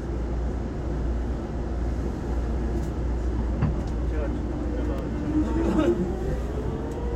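At about 4.98 s there's an electrical switching spike: a sharp snap, over in a few milliseconds, sitting on top of the sound. It's not loud, peaking somewhere around -30 dBFS. The likely culprit is a nearby switch, motor or static discharge throwing off a brief arc that the audio line picked up, rather than anything in the recorded source itself.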